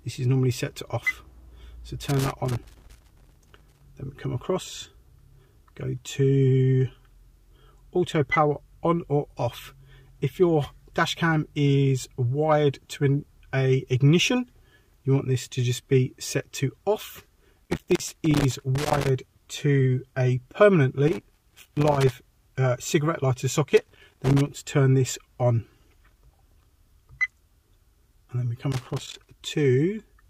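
Irregular bursts of scratchy crackle chop the sound at 2.02–3.81, 17.65–19.09, 21.08–22.13, 23.69–24.48 and 28.72–29.31 s: loose connector crackle, a worn contact rapidly making and breaking.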